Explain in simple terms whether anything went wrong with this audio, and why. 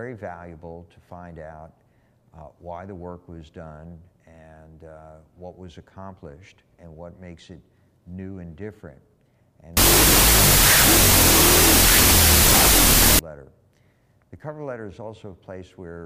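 From 9.77 to 13.19 s, a wrong sample width turns the sound into loud noise playing at half speed and lower pitch, likely from 32-bit float data being read as 16-bit integers.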